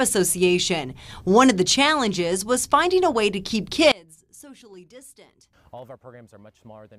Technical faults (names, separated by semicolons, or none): one channel inverted